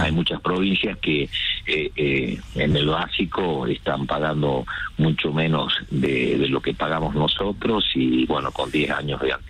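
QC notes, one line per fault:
0.57 s, 2.72–2.74 s, 4.78 s, 6.06 s, 7.39 s: repeated buffer. New audio arrived late, so the device replayed its last 10.7 ms block, which fits a 512-sample buffer, once each time and twice at 2.72 s. Each hard join sounds as a click or brief buzz.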